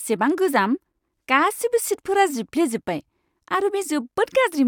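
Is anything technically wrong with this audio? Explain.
No, nothing technical stands out here; it's just a short bit of speech with nothing I'd flag.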